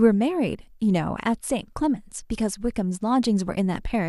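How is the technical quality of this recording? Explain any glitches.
No glitches can be heard anywhere in this recording. The speech runs without any technical fault that needs explaining.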